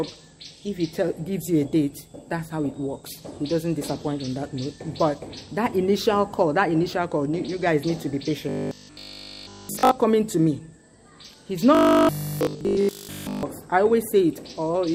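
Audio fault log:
8.49–9.91 s and 11.75–13.43 s: robotic sound from repeated short buffers. Nearly all the sound becomes a rigid 50 Hz metallic buzz, likely from a 20 ms buffer looping while fresh audio failed to arrive.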